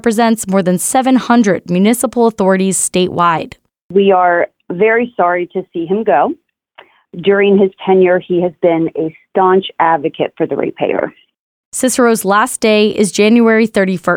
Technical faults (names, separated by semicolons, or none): none